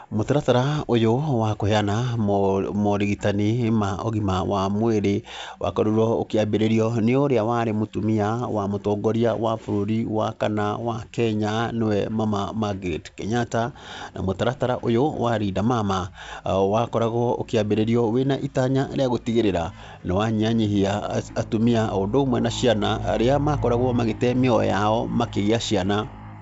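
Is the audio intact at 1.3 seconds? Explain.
Yes, the audio is intact at 1.3 seconds, with the speech passing through G.722 wideband telephone coding at 64 kbit/s, as it does at this moment.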